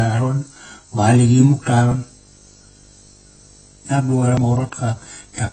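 From the start, the speech has likely passed through heavy AAC compression at a bitrate low enough to sound near 19 kbps. The encoder has thrown away everything above 8.3 kHz and coarsely quantised the rest, leaving the speech dull and smeared, with a warbling, fizzy edge on sibilants.

From 1.02 s to the end, video or display buzz is present: a screen or video cable is coupling into the audio path. It is heard as a 50 Hz buzz with hash above it, well below the speech in level, and a 15.6 kHz line-rate whine.

At 4.37 s, audio is missing between chunks: a roughly 40 ms piece is lost, likely while the recorder or processor closes one block and opens the next, which fits 2.5 s chunks. The two sides are butted together, so the speech audibly skips forward.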